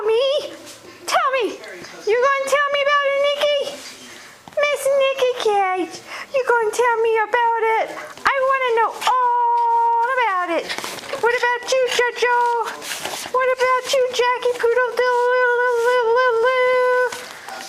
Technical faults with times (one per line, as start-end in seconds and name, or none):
none